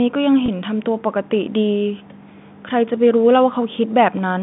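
At 0.46 to 0.48 s there is packet loss with pitch repetition. About 20 ms of audio went missing, which fits a single lost packet. The receiver filled the gap by repeating the last pitch period. The speech briefly holds on a slightly buzzy tone over the G.711 telephone band.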